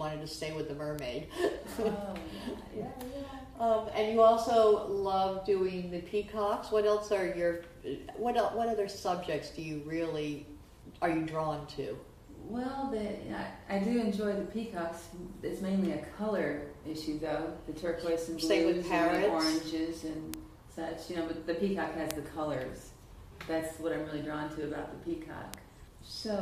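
Single bits flipped somewhere in the digital path, briefly throwing one or two samples off by a power of two before they snapped back. These bit error spikes fall at 0.99, 6.54, 19.15, 20.34, 22.11 and 25.54 s. Each is one sharp broadband tick unrelated to the surrounding sound. The loudest reach about -9 dBFS at 20.34 and 22.11 s, and the faintest is about -33 dBFS at 6.54 s.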